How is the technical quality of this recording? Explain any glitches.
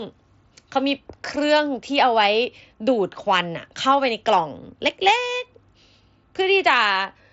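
No glitches or technical faults are audible in this recording.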